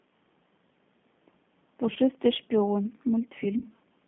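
The whole thing runs through a G.729 codec, which fits 8 kbit/s: the band sits around 150 Hz to 3.5 kHz and the speech comes out noticeably rough and synthetic. At 1.93 to 1.98 s and again at 3.58 to 3.65 s there's VoIP packet loss concealed by the speech codec. Roughly 30 ms goes missing each time, and the decoder fills the gap by stretching its last frame into a fading buzzy tone or coloured noise.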